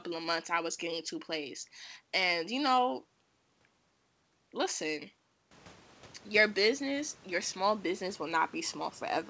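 No faults are present: the room noise steps up by about 18 dB at roughly 5.5 s but stays about 27 dB below the speech, and the G.722 call path at 64 kbps leaves nothing above 8 kHz, as that codec does by design.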